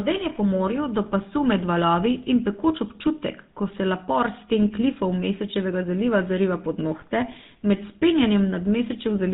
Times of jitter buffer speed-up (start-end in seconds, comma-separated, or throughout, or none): none